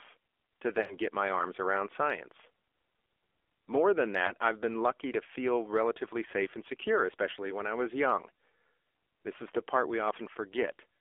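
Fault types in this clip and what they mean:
AMR narrowband mobile codec: Buzzy, synthetic speech limited to about 300 Hz to 3.5 kHz, as a mobile speech coder rebuilt it at a low bitrate, fitting 7.4 kbps.
lost AMR speech frames: An 80 ms smear fading before "my arms around science", and a brief 20 ms dip before "I've been lucky to", as the decoder patched missing frames.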